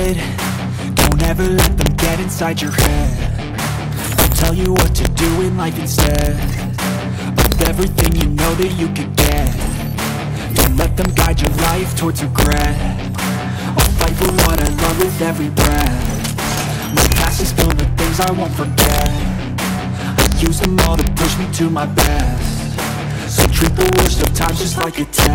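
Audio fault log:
throughout: integer overflow. Loud peaks pushed about 3 dB past full scale wrap to the opposite sign, so under one percent of samples crack violently, harsher than clipping.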